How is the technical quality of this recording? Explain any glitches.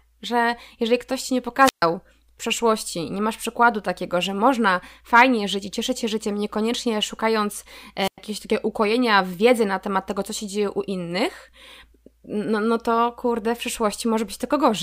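Two short gaps break the speech, at 1.62 to 1.82 s and again at 8.01 to 8.18 s. Each brings a brief surge of hiss, then near silence lasting 133 ms and 101 ms respectively, before the voice comes back. These are wireless microphone squelch dropouts: the analogue FM radio link weakened until the receiver's squelch judged the signal too poor and muted its output, and the static heard is the fading carrier just before the mute.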